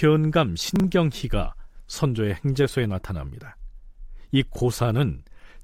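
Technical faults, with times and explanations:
0.76 to 0.84 s, chunks out of order: a 40 ms block of the speech stream was delivered or written one chunk late, so it plays after the 40 ms block that should have followed it. Nothing is missing, but the two pieces swap places, leaving three hard joins where the waveform jumps without matching. The result is a brief scrambled blip in the speech across the 80 ms span.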